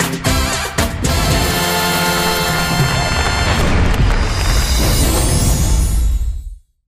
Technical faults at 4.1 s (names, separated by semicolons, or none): none